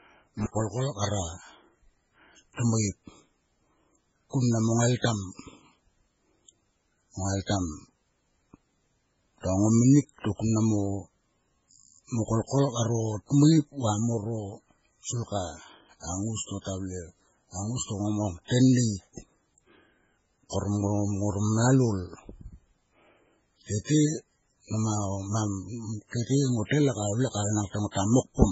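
From 0.40 to 0.60 s the speech breaks up with crackle at the edges and drops out for about 84 ms. That is an intermittent contact: a loose cable or plug opened briefly, cutting the signal and leaving only hiss until it closed again.

Throughout, the speech sounds watery and swirly, with metallic chirps on s sounds, smeared attacks and nothing above 7.7 kHz. This is heavy damage, likely from MP3 compression at a very low bitrate around 16 kbps, zeroing weak frequency lines frame to frame and cutting the treble.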